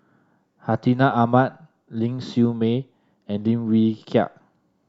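No technical faults are audible.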